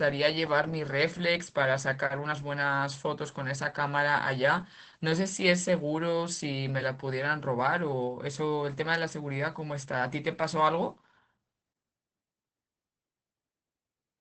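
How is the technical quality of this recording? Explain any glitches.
The quality is compromised by one fault that runs the whole length of the speech: Opus voice compression at a low bitrate. The encoder is working in its speech-oriented SILK mode, modelling the voice with linear prediction and spending very few bits on the excitation signal, which fits a rate of around 12 kbps. Bandwidth is held to wideband, so nothing is present above about 8.5 kHz, and sibilants and breath lose their air. The coarse excitation adds a plainly audible hoarse, slightly robotic edge.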